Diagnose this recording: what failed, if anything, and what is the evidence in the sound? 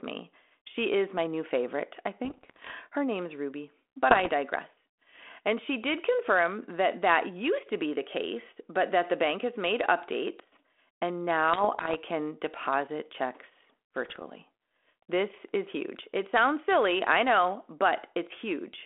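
Bit errors on the ADPCM link, a transmission fault, hit the speech at 2.25–2.71 s, 4.11–4.29 s, 11.53–12.01 s and 14.05–14.22 s. Flipped bits derail the decoder's step size and predictor, so each burst brings pops, roughness and jumpy level.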